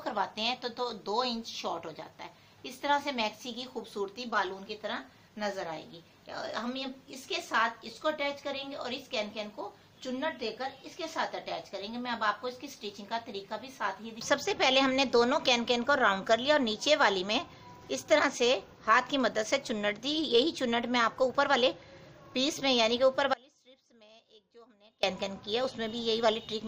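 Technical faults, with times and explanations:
23.34–25.03 s, audio dropout to a faint residue: the sound cuts out abruptly for about 1.7 s, leaving only a faint leak of the signal roughly 30 dB below its normal level, then returns mid-flow. The likely cause is the wanted signal being lost upstream while the path after the break stayed live. On a waveform the envelope collapses to a thin band with vertical edges. A spectrogram shows a dim block with sharp boundaries, not a tapering fade.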